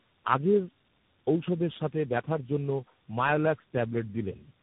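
Speech that sounds rough, muffled and warbly throughout, with nothing above 3.8 kHz: tandem speech coding, re-encoded through G.729A, AMR-NB and finally CVSD, each compounding the last codec's damage.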